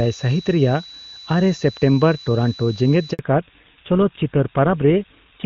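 A switching supply whistle runs throughout, a thin tone near 4 kHz about 20 dB below the speech, wandering between 3.92 and 3.99 kHz; that drift separates it from a fixed mains-related hum or a steady test tone. At 3.13 s a handover gap cuts the speech for 60 ms as the call switches networks: the sound fades quickly to true silence rather than stuttering or repeating like packet loss concealment. From 3.19 s to the end, a fallback to narrowband removes everything above 4 kHz, so the clear wideband speech heard earlier turns dull and rougher. The cut is a sudden, lasting drop in bandwidth that fits a switch from a high-rate HD Voice link to a GSM full-rate codec, not a gradual filtering.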